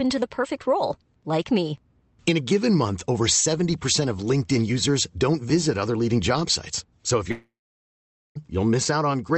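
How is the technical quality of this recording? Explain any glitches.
There's one clear glitch near the end. From 7.31 to 8.37 s the speech cuts out: a brief fading buzz, then about 0.85 s of silence, likely a long network dropout, with that second of audio lost for good.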